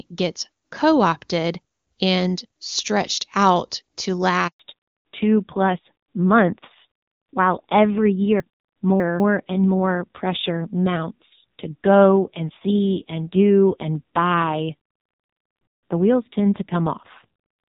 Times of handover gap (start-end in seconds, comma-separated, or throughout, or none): 4.47-4.59